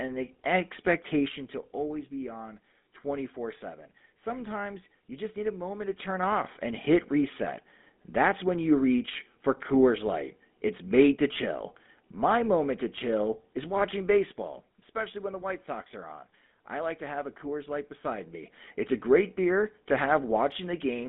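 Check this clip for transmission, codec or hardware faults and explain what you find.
A single codec fault runs through the whole speech clip: GSM full-rate codec damage. The coder models the vocal tract and drives it with a sparse, regularly spaced pulse excitation at a rate that fits 13 kbps. That makes voices plainly buzzy and gravelly. The line band is held to 200 Hz to 3.6 kHz, giving a thin telephone sound.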